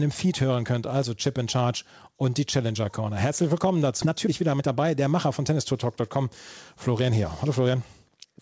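Skip ahead at 4.02 s: about a second of speech was dropped while later audio was already queued, so playback jumps straight across the gap with no fill. Jitter buffer speed-up from 4.05 to 6.26 s and again from 6.87 to 8.36 s: an overfilled buffer trims short pitch-period slices repeatedly, running at 117% and then 108% with pitch unchanged, so delivery sounds hurried. Throughout, nothing is heard above 8 kHz, consistent with a wideband call codec such as G.722.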